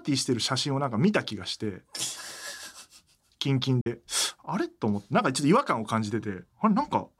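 At 3.81 s the speech cuts to abrupt silence for about 46 ms, then resumes as if it had played on, likely a Bluetooth dropout from two late packets.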